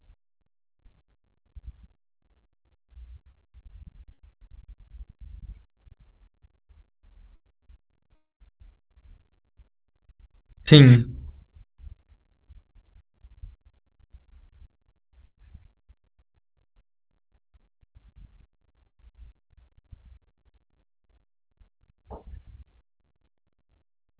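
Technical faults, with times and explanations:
3.32 s, 4.14 to 4.20 s, 7.36 to 7.42 s, 9.94 s to 9.97 s and 18.87 to 18.93 s, short concealed packet loss: each time 20 to 40 ms of the call arrived too late, and the receiver extended the preceding sound to cover it. The result is a brief smear or wobble against audio that carries nothing above 4 kHz.
8.16 to 8.42 s, long network dropout: the sound stretches into a fading buzz or hiss, then drops to near silence for about 0.15 s before speech returns further along. The likely cause is an interruption in arriving audio, with the concealment fill running out and a stretch never played.
15.27 to 15.40 s, burst of packet loss: about 120 ms of consecutive audio failed to arrive in time. The receiver held the last sound as a fading buzz or hiss, turned down toward near silence, then resumed later with the middle section gone.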